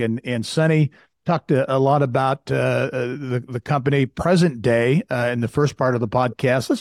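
Speech recording with no audible technical faults anywhere in the clip.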